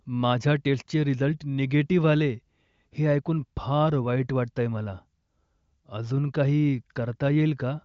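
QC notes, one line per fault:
No faults found: the speech is carried over the AMR wideband (HD Voice) codec at 23.05 kbit/s, with the band ending at about 7.5 kHz as that path normally does.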